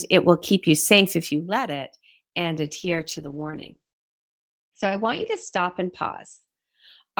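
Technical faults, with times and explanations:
2.64–6.99 s, call bitrate drop: just after "let it and", the bandwidth estimate fell and the encoder's rate was cut from 32 kbps to 10 kbps, bottoming out for about 2.5 s. With so few bits, the coder quantises the speech coarsely, giving a rough, watery texture, and narrows the coded band from 20 kHz to 8 kHz, so the air above 8 kHz vanishes and the speech turns muffled until the rate recovers near the end.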